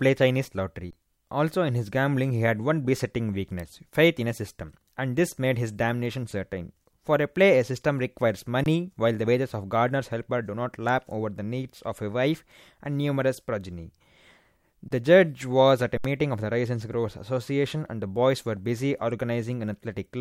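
The output buffer ran dry four times, an underrun with held sample. Each time the converter froze on its last value, flattening the speech briefly: about 23 ms at 0.91, 8.64 and 14.88 s, fitting a 1024-sample buffer, then 70 ms from 15.98 to 16.05 s. Audio was dropped meanwhile.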